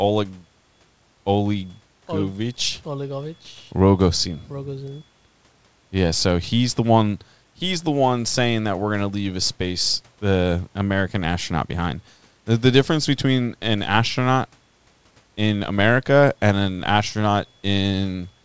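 It is a speech recording, and nothing is technically wrong with it.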